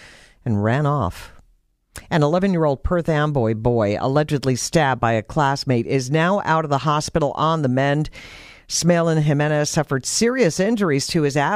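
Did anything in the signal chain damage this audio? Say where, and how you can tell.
No, nothing in the signal chain has left an audible mark on this speech recording. At no stage, from capture through to playback, is there any damage to point to.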